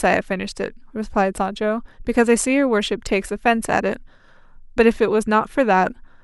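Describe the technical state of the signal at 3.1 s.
At 3.1 s the speech signal is intact, with no fault audible at that moment.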